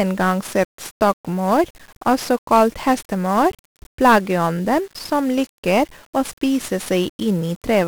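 Speech that's been squeezed through 1-bit DFPWM compression from start to finish, and the damage is heavy. Each sample is just a single up-or-down nudge to a tracking level, so the codec can only chase the waveform roughly, and that leaves a thick layer of broadband quantisation noise riding on everything. The voice comes out fuzzy and crackly, with the upper frequencies smothered under hiss, which fits a rate around 48 kbps.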